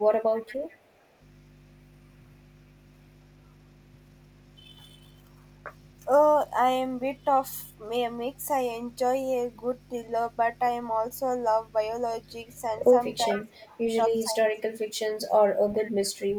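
Mains hum runs through the whole recording: a steady low tone at 50 Hz sitting about 20 dB below the speech. A ground loop or a nearby transformer has let the power line leak into the signal path, so the buzz never changes with what is being said. It stays underneath every pause and every phrase.

An echo leak appears from 0.18 to 0.78 s. A faint delayed copy of the speech, trailing the original by 433 ms and roughly 20 dB quieter, sits behind it. This is likely the far end playing the call on a loudspeaker, with its echo canceller failing to remove everything its microphone caught. What slipped through came back as a delayed ghost of the voice.

The background is gated by the echo canceller from 0.78 to 1.19 s. For about 400 ms the room sound sinks by up to about 7 dB, then comes back. The canceller clamped the microphone down while the loudspeaker was still active, and released it once playback stopped. 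The result is a brief dip in the ambience.

Speech is suppressed in double talk from 13.28 to 13.89 s, with the voice pulled down by around 25 dB over roughly half a second. Both sides were likely talking together, and the canceller, unable to tell the local talker from the loudspeaker echo, turned everything down. Inside that window, from 13.33 to 13.44 s, another echo leak surfaces at the same 433 ms delay, roughly 15 dB below the speech.

Double-talk suppression returns from 14.24 to 15.37 s, this time deeper, close to 30 dB, and covering about a second. The talker is pulled down for that stretch before recovering. A last echo leak follows from 15.74 to 15.91 s. It is again a 433 ms delayed copy at roughly 20 dB down, a short scrap of returned voice.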